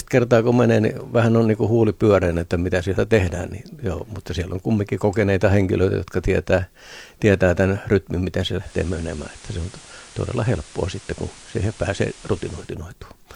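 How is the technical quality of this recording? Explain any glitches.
The recording has one clear glitch, between 8.57 and 12.76 s, where the speech goes through a digital radio blending to analogue episode. The receiver lost its digital stream and cross-faded, over about 0.2 s, to the station's FM broadcast, then faded back. During that stretch a steady hiss sits roughly 25 dB under the speech, with no change in level. Unlike a codec bitrate drop, which smears or swirls the treble, this brings in broadband hiss.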